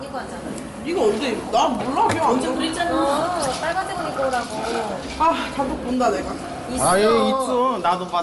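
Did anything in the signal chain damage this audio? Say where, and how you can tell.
Yes, at the codec stage, throughout all of these sounds: the grainy, breathy coarseness with noise-like texture in the upper band points most likely to Bluetooth LC3 compression. There is nothing above 11.6 kHz, a limit that fits the sample rate the link chose. Unlike a plain analogue low-pass, the band below the cut-off is itself roughened, because sparse spectral content is replaced with filled noise. The damage level suggests about 48 kbps in 10 ms frames.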